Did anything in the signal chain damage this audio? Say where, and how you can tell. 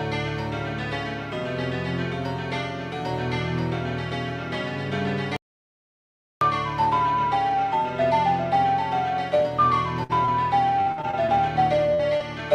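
Yes. There are two separate problems: a total input loss at the capture stage, and packet loss on the network path with the receiver's concealment filling the holes.

The audio dropout to silence runs from 5.36 to 6.41 s. About 1.05 s of material is gone, and the sound stops and restarts mid-flow. On the waveform this is a flat line of silence. On the spectrogram it is a fully black block with no room tone or noise floor. That points to a capture or input stage, most likely a disconnected device, a broken link or a stray mute, while the recorder kept writing empty samples.

A burst of packet loss occurs at 10.03 to 10.11 s, where about 60 ms is missing, and again at 11.94 to 12.01 s, where about 40 ms is missing. In both, the last sound is carried forward and fades before the audio resumes further along. On a spectrogram the fill appears as smeared, repeated spectral content dimming toward the gap's end. 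The waveform shows a decaying tail and then a jump in content. This is network loss handled by the decoder's concealment.

Short concealed packet loss appears at 10.25 to 10.29 s, about 20 ms missing, and at 12.17 to 12.22 s, about 40 ms missing. Each is heard as a brief smear or wobble rather than a gap. On the spectrogram it shows as a narrow vertical band where the harmonics blur or noise replaces detail. On the waveform it is a short segment that doesn't match its neighbours. A few packets arrived too late and were patched by the receiver.

Repeated packet loss gives robotic sound from 10.81 to 11.30 s. Five separate gaps, the longest 57 ms, remove about 160 ms in total, and concealment makes up roughly 30% of that stretch. The result is choppy, with pieces missing. A spectrogram shows a striped, stuttering pattern of frozen or smeared frames alternating with real content. The waveform is broken into irregular chunks. 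This is sustained network loss, with one gap patched after another.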